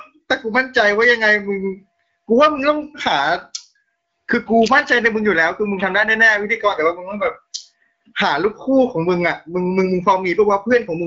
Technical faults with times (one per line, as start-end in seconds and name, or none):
none